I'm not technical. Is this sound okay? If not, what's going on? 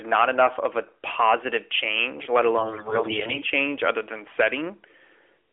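No. From about 2.58 to 3.46 s, right after "a positive change let" and until "other than", the speech turns hoarse, scratchy and gargly, though its pitch and loudness stay roughly the same. These are AMR bit errors. On a weak mobile link, a large share of the less-protected parts of each compressed chunk arrived corrupted. The phone's speech rebuilder then placed its sound pulses wrongly and got fine details of pitch and tone wrong, all through the AMR narrowband mobile codec, whose phone-line band is heard throughout.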